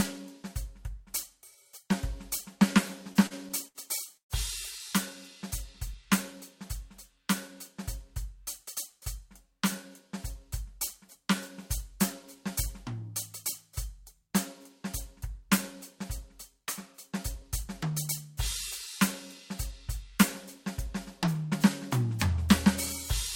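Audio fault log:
3.13–3.78 s, repeated stalls (stutter): the music halts four times within this span, with the longest gap 72 ms and about 135 ms filled in total, roughly a fifth of the span. Packets arrived late, the jitter buffer kept running dry, and the receiver stretched the last sound each time, so the playback drags and stutters without losing material.
4.17–4.33 s, call audio freeze: the music stops for about 129 ms, going silent for 110 ms of it, then resumes from the same point with nothing skipped. This is likely a jitter buffer run empty by packets held up in transit, with the last sound continued and faded before playback picked up again, adding 129 ms of delay.
17.12–17.91 s, jitter buffer speed-up: the music plays about 4% fast at unchanged pitch, and the tempo loses its steadiness. Roughly 40 ms of audio was trimmed in many small pitch-period cuts as the receiver drained a jitter buffer that had filled beyond its target.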